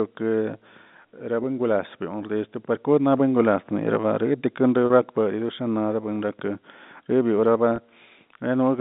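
At 4.86 to 4.90 s and again at 7.76 to 7.78 s there is packet loss with pitch repetition. Audio went missing for about 40 ms and then 20 ms. That fits two lost 20 ms packets and then one. The receiver filled each hole by looping the last pitch cycle, so both spots sound like a brief held, buzzy tone before the speech resumes. The G.711 telephone band, roughly 150 Hz to 3.7 kHz, carries through both gaps.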